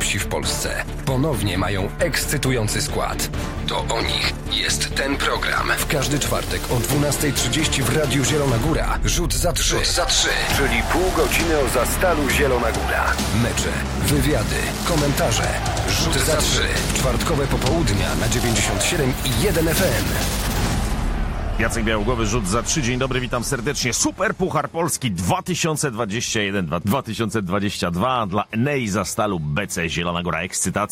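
No technical faults can be heard anywhere in the audio.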